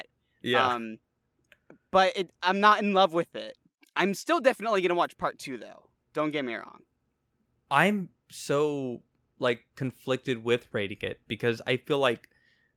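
Nothing in this speech recording stands out as a technical fault at any point, so there's really nothing to flag here.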